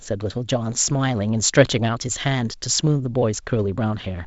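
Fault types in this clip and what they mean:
No faults are heard in this speech clip.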